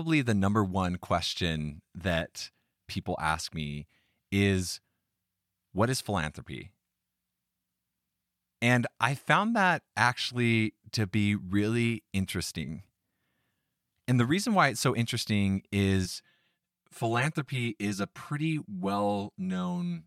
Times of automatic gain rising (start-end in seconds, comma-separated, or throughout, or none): none